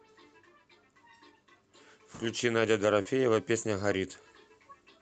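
Short concealed packet loss at 3.01 to 3.07 s: about 40 ms of the speech never arrived at the decoder in time, so the receiver extended the preceding sound, carrying on its pitch where it was voiced or substituting shaped noise where it was not, before crossfading into the real audio that followed. The result is a brief smear or wobble in the speech, with a short sound possibly lost, heard through a call path whose top end stops near 8 kHz.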